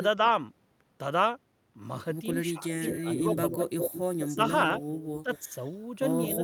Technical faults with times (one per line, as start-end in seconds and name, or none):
2.52-2.72 speech suppressed in double talk
2.84-5.71 echo leak
3.26-3.57 speech suppressed in double talk
4.30-4.40 speech suppressed in double talk
5.23-5.54 speech suppressed in double talk
6.28-6.39 echo leak